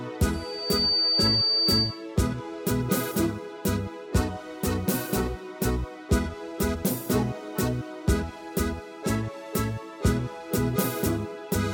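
From 0.34 to 2.06 s there's a loudspeaker feedback squeal: the mic is hearing its own speaker, and at 4.6 kHz the loop gain tops one, so that tone swells up over about half a second into a piercing whistle sitting roughly 5 dB above the rest of the sound.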